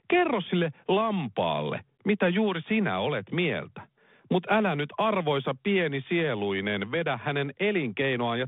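From 3.70 s to 5.49 s the speech picks up sample clock jitter. The converter's clock wanders by around a microsecond, so each sample lands slightly early or late, and the error grows with the slope of the waveform. It sounds like a fine, rough hiss riding on the loud, bright syllables and vanishing in pauses. On a spectrogram it shows as a faint noise haze, about 45 dB below the speech, that swells and fades with it. The haze stays under the 3.8 kHz ceiling of the 32 kbit/s G.726 telephone band.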